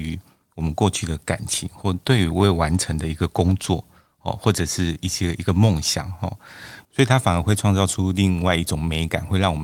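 No technical faults can be heard anywhere in this recording. The speech continues without any interruption or audible disturbance.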